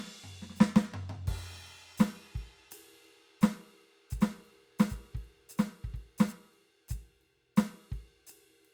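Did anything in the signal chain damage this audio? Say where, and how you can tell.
Yes. From 4.21 to 6.33 s the music carries a doubled audio track: a dry, full-band copy roughly 0.7 s late and about 5 dB down, starting and stopping abruptly. It is likely from a second, slower capture path or a misaligned edit, not room echo, which would decay.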